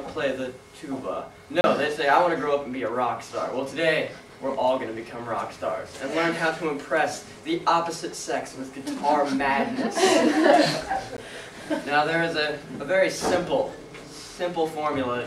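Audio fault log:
1.61–1.64 s, block of digital silence: a short hole with abrupt edges, as 30 ms of zeros replace the audio, left unfilled in time or from invalid values.
11.17 s, block of digital silence: a brief tick or dip rather than audible silence, since this gap lasts only 13 ms.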